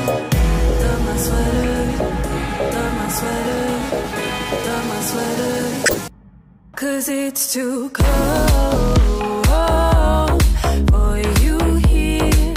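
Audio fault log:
5.86–5.94 s, corrupt frame decoded: for about 80 ms, energy lands at frequencies where it doesn't belong, rising to around -5 dBFS. That span fits roughly three damaged compressed frames that the decoder played anyway, with flipped bits turning into wrong gains or misread codes. It differs from a click or a plain dropout because the fault lasts for whole frame lengths and fills them with misplaced spectral content, not an instant spike or clean silence.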